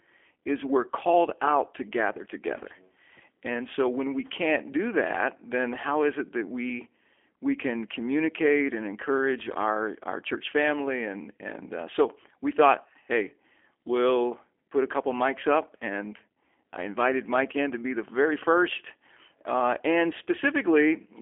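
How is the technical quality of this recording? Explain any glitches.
Poor, with one fault throughout. From start to finish the speech sounds narrow, rough and faintly synthetic, with nothing above 3.5 kHz: G.729 codec damage, speech resynthesised from a filter and sparse pulses, fitting 8 kbit/s.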